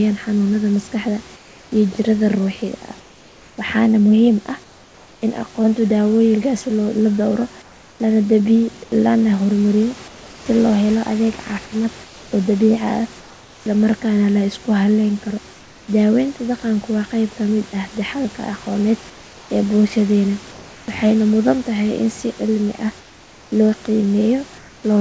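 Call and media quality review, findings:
Comfort noise in place of the background: in pauses the room tone turns flat, steady and featureless, at 1.36–5.22, 7.62–10.46 (ending just before "loo helo"), 12.04–13.66, 15.54–15.88 (about 3 dB quieter), 19.10–20.88 and 23.00–24.84 s. Likely cause: sender-side discontinuous transmission, where the receiver synthesises shaped noise whenever the voice detector stops transmission.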